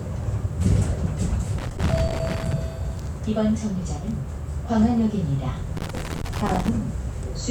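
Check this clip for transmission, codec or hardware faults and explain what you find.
Two bursts of loose connector crackle occur, from 1.58 to 2.53 s and from 5.77 to 6.69 s. A worn contact repeatedly breaks and remakes the circuit, chopping the audio into irregular scratchy crackle. A waveform shows jagged dropouts and spikes, and a spectrogram shows scattered broadband vertical streaks.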